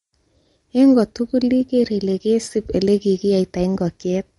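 Throughout the speech there is plainly audible damage consistent with MP3 compression, likely at a low bitrate around 48 kbps. Nothing remains above 11.2 kHz, and the sparse bit allocation leaves a watery, swirling texture as weak frequency lines drop in and out, with chirpy s sounds and smeared attacks.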